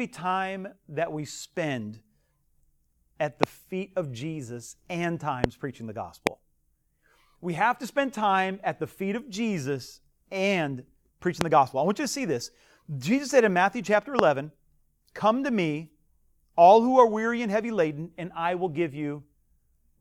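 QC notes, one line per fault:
3.43–3.46 s (between "at the" and "feet of"), 5.44–5.46 s, 6.27–6.29 s (after "preaching the"), 11.41–11.43 s (between "and preaching" and "the gospel I want"), 14.19–14.21 s: loud pop, single sharp thumps about 20–25 dB above the speech, likely voltage spikes from a switch, plug or static. The speech continues intact underneath, unlike a dropout.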